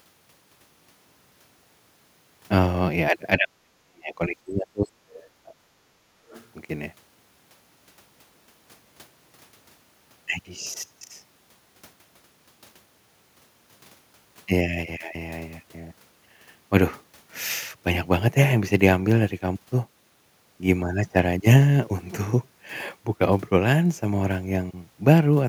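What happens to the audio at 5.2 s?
From 5.10 to 5.24 s, the other side's voice leaks through. A brief, faint second voice sits roughly 25 dB below the main speech. It is likely loudspeaker playback reaching the microphone that the echo canceller failed to fully remove.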